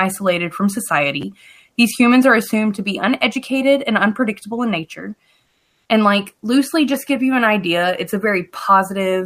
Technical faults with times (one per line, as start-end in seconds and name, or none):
1.21-1.23 chunks out of order
5.45-5.89 comfort noise in place of the background